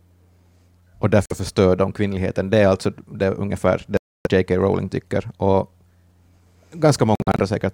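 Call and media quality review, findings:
Speech drops to silence three times, likely a Bluetooth dropout, with late packets discarded and playback resuming as if it had played on. There's a short hole at 1.26–1.32 s before "förstör de kvinnligheten", about 0.3 s gone at 3.97–4.27 s after "är alltså det ungefär", and choppy gaps up to 46 ms at 7.15–7.40 s.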